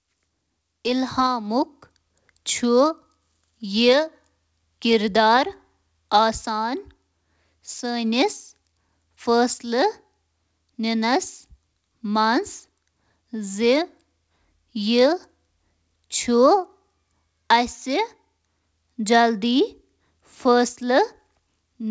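Nothing stood out on listening to this speech, which carries the limited top end of a wideband call path, with nothing above about 8 kHz.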